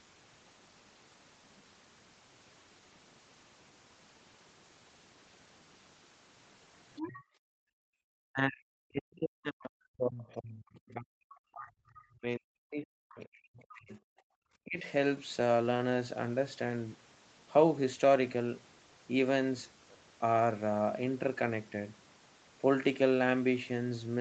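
A speech recording off a call, with the top end stopping at 8 kHz in a way that fits a low-rate Opus path, and the echo canceller having a rough time of it. At 6.96 to 7.21 s you get a short scrap of the other side's voice leaking through, sitting about 10 dB under the talker. That's likely loudspeaker sound the canceller didn't fully scrub from the mic. Right after, from 7.21 to 7.98 s, there's background gated by the echo canceller. The room tone drops by about 40 dB for most of that stretch while the canceller clamps down, then comes back once it lets go. The same thing happens again briefly at 14.26 to 14.36 s, a dip of about 40 dB lasting roughly a tenth of a second. The big one is speech suppressed in double talk from 8.26 to 13.98 s. For around five seconds in total, the talker's voice keeps ducking and breaking up, sinking by as much as 40 dB or so at its worst. That's likely both sides talking at once, with the canceller unable to tell its own talker from the echo and pulling everything down together. 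A shorter repeat at 14.64 to 14.85 s knocks the voice down by something like 20 dB.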